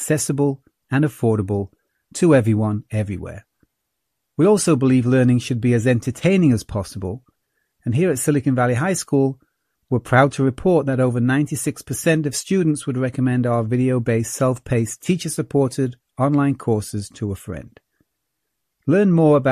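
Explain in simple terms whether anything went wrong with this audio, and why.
Nothing went wrong with this audio; there is no fault to be heard anywhere in the recording.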